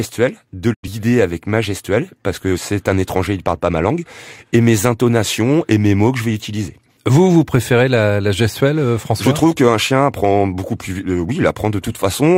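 At 0.73 s the speech quickly fades out over about 20 ms and stays silent until 0.88 s, resuming at "avec ma". This is a digital broadcast dropout: the receiver muted when frames failed, losing roughly 85 ms of audio, which fits two lost frames.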